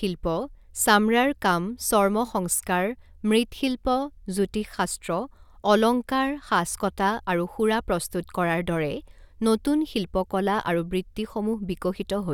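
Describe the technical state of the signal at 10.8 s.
At 10.8 s the speech signal is intact, with no dropout, clipping, glitch or other fault.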